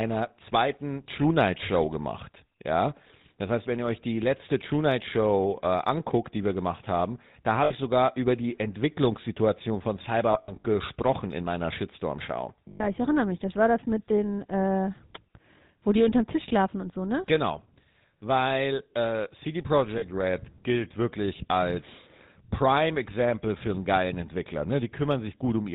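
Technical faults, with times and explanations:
throughout: GSM full-rate codec. The whole clip has that buzzy, gravelly GSM texture, plainly audible on every phrase, and nothing survives above 4 kHz, so it sounds narrow and dull. The coder rebuilds the speech from a vocal-tract model fed by sparse, evenly spaced pulses, which is where the grit comes from. That fits the 13 kbps full-rate coder.
7.64–7.73 s, 10.32–10.64 s, 12.68–12.88 s, 19.98–20.04 s: lost GSM frames. Each gap gets filled by replaying the settings of the last good frame, so you hear a short metallic, rough ring instead of a dropout. The first comes right after "wir gemacht haben da" and lasts 60 ms. The second is the messiest: 200 ms of losses scattered over 320 ms, with the longest run about a tenth of a second, just before "gesprochen in meiner". The third lasts 120 ms before "ich erinnere mich", and the last is a brief 40 ms blip.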